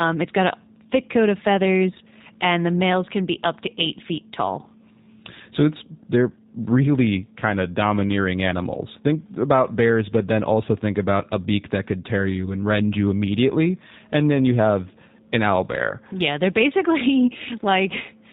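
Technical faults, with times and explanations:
Throughout, G.729 codec: the speech sounds narrow and slightly buzzy, with a rough, synthetic edge and nothing audible above about 4 kHz. The damage is plainly audible, and it fits the G.729A variant at 8 kbit/s. The codec discards the waveform and rebuilds each 10 ms frame from a vocal tract filter, a pitch predictor and a handful of pulses. That coarse rebuilding produces the roughness, and its narrowband design cuts away everything above 4 kHz.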